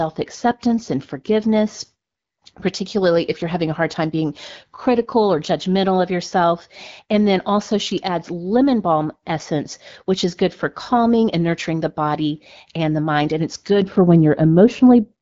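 Right near the end of the speech, from about 13.82 s through to the close at 15.22 s, there's de-emphasis applied wrongly. A treble cut meant to undo pre-emphasis has been applied where it doesn't belong, so the top end slopes away smoothly, roughly 11 dB down at 10 kHz relative to 1 kHz. That last stretch goes dull and muffled, pulling the already band-limited AMR wideband (HD Voice) sound, which has nothing above 7.5 kHz and fits a 12.65 kbit/s rate, darker still.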